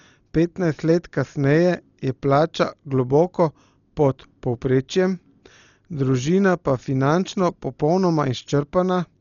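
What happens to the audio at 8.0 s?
At 8.0 s the speech is dull, with nothing above 7 kHz, and rough, fluttering noise. This runs throughout and is likely heavy Dolby Digital compression at a very low bitrate.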